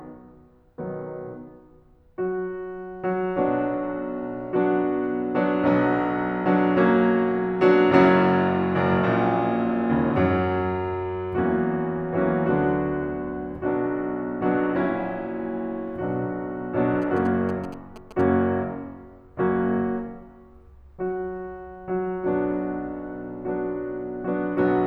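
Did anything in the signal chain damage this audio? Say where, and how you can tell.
Yes. From 17.02 to 18.21 s the music carries GSM signalling bursts, picked up in the analogue wiring. A nearby 2G phone's radio bursts were rectified by an audio stage, leaving a galloping dit-dit-dit of short buzzes at about 217 Hz, some 15 dB below the music. It isn't mains hum, which is steady at 50 or 60 Hz, and it isn't digital dropout clicks, because the buzzes come in rhythmic groups with a buzzy 217 Hz character.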